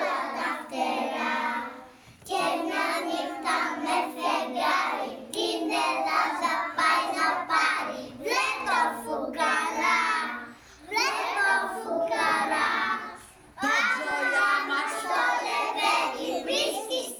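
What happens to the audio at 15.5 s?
Nothing goes wrong at 15.5 s; the audio plays through that moment intact, with no fault to be heard.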